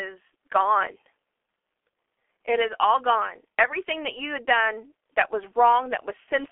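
Speech running through the G.723.1 codec the whole way: nothing above 3.7 kHz, heavy damage at roughly 6.3 kbit/s, so it's muffled and hoarse with smeared consonants.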